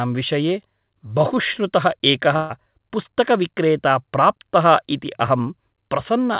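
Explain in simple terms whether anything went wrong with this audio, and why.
At 2.36 s, a burst of packet loss removes about 140 ms of speech. Unlike a silent dropout, the gap fills with the last sound held on and fading away.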